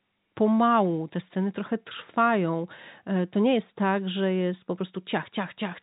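No technical faults can be heard anywhere in this speech clip. It carries the sound of G.711 A-law telephone coding at 64 kbps, with nothing above 4 kHz and little or no audible quantisation noise riding on the speech.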